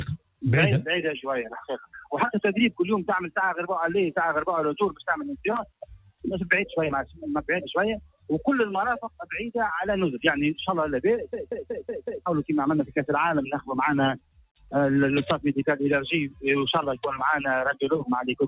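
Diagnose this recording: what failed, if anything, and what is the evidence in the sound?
A noise suppressor was applied to music or sounds at the call-processing stage, across the whole clip. Built for speech, it treats sustained tones and decays as noise, so the level swings by roughly 10 dB. On a spectrogram, held bands fade while onsets stay bright.

The same stage produced five places where sound was cut by the noise suppressor: 0.18–0.43 s (about 22 dB deepest drop), 5.65–6.24 s (about 18 dB), 8.04–8.29 s (about 18 dB), 9.07–9.23 s (about 16 dB) and 14.19–14.72 s (about 21 dB). The waveform envelope hollows out at each point, and tails are cut short.

A system hang loop at the driver or buffer stage runs from 11.33 to 12.26 s. A 185.76 ms segment repeats five times at 5.38 Hz, which fits an 8192-sample ring buffer cycling while the system froze. The result is a stutter, and roughly a second of audio is lost. 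The waveform shows identical blocks tiled end to end, and the spectrogram shows vertical seams at each repeat.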